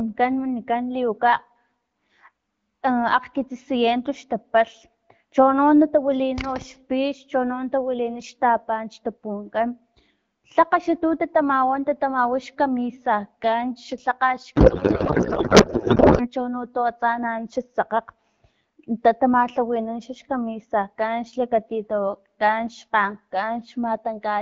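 From 14.55 to 16.29 s the speech becomes garbled, warbling noise that barely tracks it. This is a codec payload misread: the AMR-WB frames are unpacked with their fields shifted, which points to octet-aligned packing read as bandwidth-efficient. Unlike packet loss, nothing drops out; the sound stays continuous but wrong.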